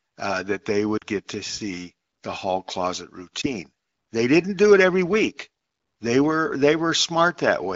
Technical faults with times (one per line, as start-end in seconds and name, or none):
0.98-1.03 lost AMR speech frames
3.41-3.50 lost AMR speech frames